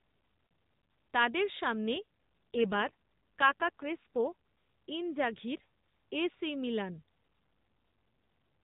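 Speech carried over a narrowband AMR-NB mobile codec, with nothing above 4 kHz, suffers an AMR rate drop twice. From 1.94 to 4.33 s, after "তাদের সামনে", and from 7.40 s to the end, after "এ সি মিলান", the network pushes the codec onto fewer speech bits, which fits a step from 12.2 to 5.9 kbps, so the voice turns rougher and buzzier without losing band or breaking up.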